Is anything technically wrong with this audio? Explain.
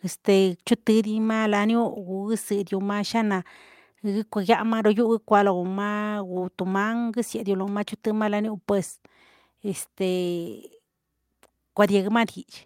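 Yes. At 12.3 s, near the end, the speech and the background beneath it drop together by about 3 dB in a single step. This is a microphone volume stepped down, likely the call software lowering the input volume after judging the microphone too loud or near clipping.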